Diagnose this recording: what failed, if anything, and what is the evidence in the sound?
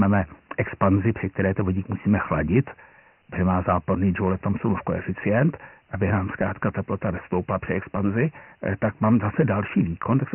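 At the codec stage, Dialogic VOX ADPCM coding, consistent with about 24 kbps, cuts everything above 3 kHz and leaves heavy gritty hiss trailing the speech throughout.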